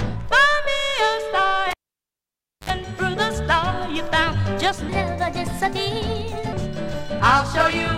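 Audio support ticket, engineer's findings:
Cable pulled and plugged in, 1.71 to 2.70 s. Pop, then near silence for about 0.94 s, then a 61 ms burst of 50 Hz mains buzz while only the tip's touching, another pop as signal comes back. Check the jack and lead.

Section at the wrong speed, 4.89 to 6.53 s. Runs 1.18x fast, pitch up around three semitones, both jumping together at the edges. Likely a clock mismatch in the editor or player. Worth checking the project rate.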